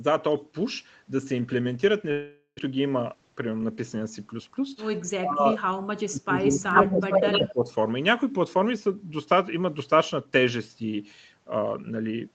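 From 2.11 to 2.61 s there is a long network dropout, most likely caused by audio that never arrived. For roughly 475 ms the receiver keeps extending the last sound as a buzzy, fading hiss, which covers about 400 ms of lost speech, followed by a 70 ms gap of near silence before the speech resumes with that portion missing. On a waveform the envelope decays smoothly and flattens before normal speech returns. A spectrogram shows smeared, repeating harmonic bands that fade into a narrow dark strip.

From 3.14 to 3.63 s a jitter buffer speed-up plays the speech at about 109% of normal speed while the pitch stays the same. The receiver trims short pitch-period slices again and again, removing around 50 ms in total, to pull its built-up delay back toward target. The result sounds hurried. A spectrogram shows the harmonics holding their spacing while syllables are compressed in time, and the waveform has splice points where the cycles were joined.

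Between 5.20 and 5.62 s the speech dips by as much as roughly 20 dB. From 6.03 to 7.71 s it dips again, by up to about 30 dB, across about a second and a half. This is speech suppressed in double talk, likely an echo canceller turning down the near talker while the far side was also speaking. The voice thins and drops out in pieces. On the waveform these sections show a sagging, chopped envelope, and the spectrogram fades most in the upper bands. Throughout the clip, nothing appears above 8 kHz.

During the second suppressed stretch, echo leak is heard from 6.76 to 6.84 s and again from 7.12 to 7.49 s. A delayed copy of the speech trails the original by 80 ms, likely residual loudspeaker echo that got past the canceller. In the first burst the copy is roughly 5 dB louder than the speech. In the second it is about as loud as the speech. It sounds like a doubling. On a spectrogram the harmonic patterns repeat, shifted 80 ms later.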